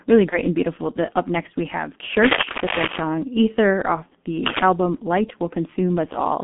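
Speech coded through a G.723.1 codec for its whole length, with the band held to roughly 200 Hz–3.5 kHz and heavy coding damage consistent with a 6.3 kbit/s stream. The long frames and slowly updated voice model leave it muffled and hoarse, with smeared consonants. From 0.29 to 0.39 s, just before "and beautiful", there is VoIP packet loss concealed by the speech codec. The decoder bridges the gap by extending its last pitch and filter at falling gain, so the sound is briefly stretched and fades, and it stays weak for a moment after real data resumes. The gap fits a single lost 30 ms frame. From 2.18 to 3.00 s, right after "up next we have", cable scratch noise runs over the speech as dense, irregular scratching and rustling at about the same level as the voice. It is likely caused by a worn cable, connector or control being moved so that its contact resistance fluctuates rapidly.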